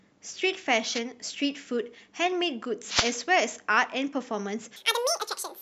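At 0.94 to 1.00 s, and again from 2.86 to 3.16 s, the speech is covered by a brief swish of static. This is a wireless microphone noise hit: the FM radio link fades as reflections cancel, and receiver hiss surges in. Unlike a digital dropout, the signal isn't cut to silence but is buried in noise. From 4.76 s to the end at 5.61 s, a section at the wrong speed plays 1.92 times too fast, raising pitch by about ten semitones and hurrying the delivery. It is likely the result of playback on a mismatched clock. Because tempo rises along with pitch, it differs from a pitch-shift effect, which would keep timing intact.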